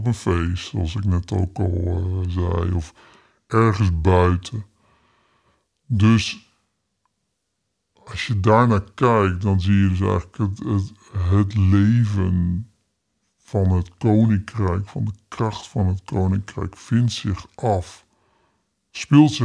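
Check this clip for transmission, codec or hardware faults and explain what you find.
One fault runs through the whole clip: wrong sample rate. The speech sounds slow and deep, about 0.69 times normal speed and roughly 6.5 semitones low. This fits a 32 kHz recording played back at 22 kHz without conversion.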